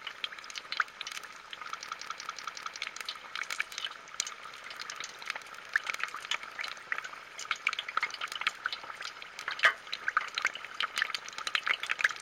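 From 1.86 to 2.79 s, a 186 ms fragment stutters five times at about 5.4 Hz: a system hang loop, replaying a ring buffer that fits 8192 samples.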